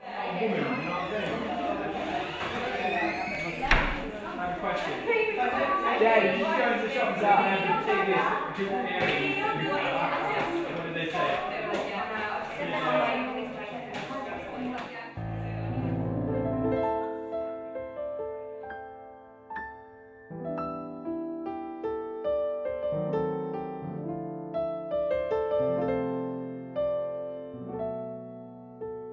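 No technical faults can be heard anywhere in the audio.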